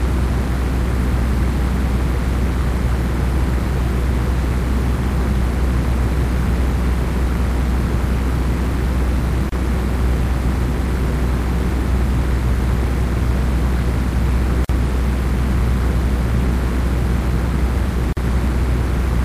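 Sounds, broken by three gaps at joins of encoded pieces (9.49 s, 29 ms; 14.65 s, 49 ms; 18.13 s, 44 ms). Untrimmed encoder padding between separately encoded segments shows as narrow blank vertical stripes with smeared edges.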